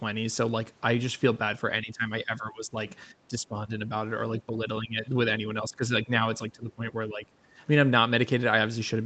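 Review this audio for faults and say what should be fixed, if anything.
The speech keeps ducking between 1.82 and 7.31 s, at 1.82–2.77, 3.1–3.92, 4.46–4.59, 4.81–5.06, 5.47–6.1 and 6.38–7.31 s, sinking by anything from a few dB to about 15 dB. That pattern looks like speech suppressed in double talk: the likely cause is an echo canceller that couldn't tell the near talker from loudspeaker echo while both sides spoke, so it pulled everything down. The top end stopping around 8 kHz is just the call codec. To prevent it, tune the echo canceller's double-talk detection or use a headset so there's little echo to fight.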